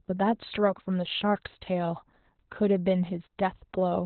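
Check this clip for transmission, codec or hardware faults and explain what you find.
One codec fault runs through the whole clip. Opus voice compression is heavy from start to end. Nothing is present above about 4.2 kHz. That points to SILK in narrowband mode at a very low rate, around 8 kbps. The narrowed band and coarse excitation coding make the speech muffled, hoarse and slightly robotic.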